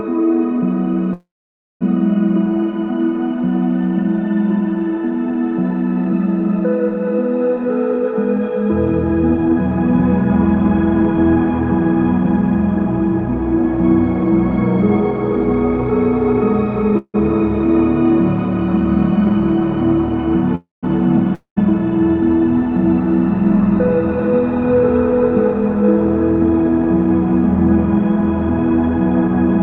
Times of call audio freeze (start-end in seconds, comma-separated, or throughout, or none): 1.13-1.83, 16.98-17.16, 20.55-20.85